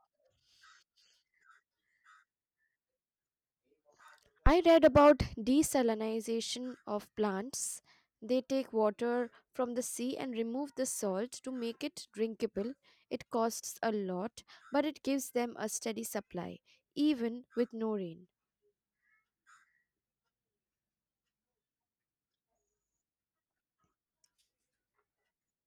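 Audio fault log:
4.47–4.52 s, phantom power thump: a supply voltage on the live input is switched, and that sudden DC step passes through the coupling capacitors as a single low-frequency pulse. It is heard as a deep thump, peaking at about −12 dBFS, and dying away in roughly 11 ms, so it registers as a brief dull knock rather than a lingering boom.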